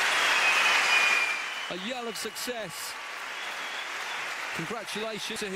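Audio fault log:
5.36 s, compressed frames skipped: a short run of frames was missing or rejected as damaged, so the decoder dropped them. The audio jumps ahead by roughly 150 ms, which fits a few 32 ms frames.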